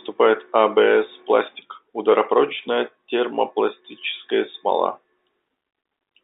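Speech recording with no technical faults to report. It has the narrow sound of G.711 telephone coding, with the band held to roughly 300 Hz to 3.7 kHz and at most a faint level-following noise from the coding.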